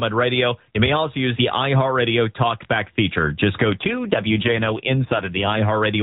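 From 3.7 to 5.6 s an AMR rate drop cuts the codec's bit budget, sounding like a fall from 12.2 to about 5.9 kbps, so the narrowband speech turns rougher and more synthetic.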